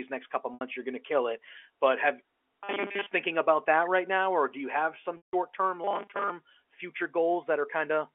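At 0.54 s, after "next couple", packet loss with pitch repetition bridges 70 ms with one repeated pitch period, heard as a briefly held, buzzy note. On a spectrogram it appears as flat, frozen harmonic streaks.

From 2.64 to 3.06 s, ending just before "thinking about that right", the robotic sound from repeated short buffers imposes a rigid, metallic 200 Hz buzz. That rate fits a 5 ms buffer being replayed, likely because new audio arrived too seldom, so most of the real audio is skipped. The waveform shows identical cycles repeating every 5 ms.

At 5.17 s, after "do you have some", packet loss with pitch repetition covers 160 ms. The held pitch fades into silence and the sound returns through a short cross-fade, visible as a tapering envelope followed by a gap.

From 5.84 to 6.31 s, the same 200 Hz robotic buzz, likely from repeated 5 ms buffers, returns, appearing as evenly spaced vertical striations on the spectrogram.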